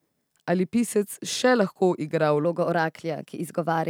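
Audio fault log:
2.45–3.89 s, section at the wrong speed: from 2.45 s to the end the speech turns hurried and higher, lifted by about two semitones, because that stretch plays 1.12 times too fast. The likely cause is playback or editing against the wrong clock, which shifts tempo and pitch together.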